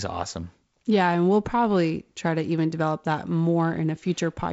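Nothing stood out on listening to this speech clip, which comes across as wideband telephone audio in G.722 at 48 kbit/s, with no content above roughly 7.7 kHz.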